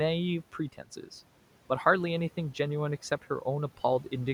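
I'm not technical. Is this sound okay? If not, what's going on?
No, not quite. Between 0.72 and 1.09 seconds, some speech cut by the noise suppressor gets mistaken for background noise, so bits of speech, about a tenth of a second in total, sound swallowed.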